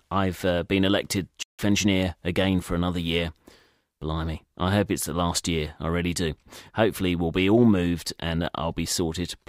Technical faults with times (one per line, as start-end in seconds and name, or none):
1.42-1.59 Bluetooth dropout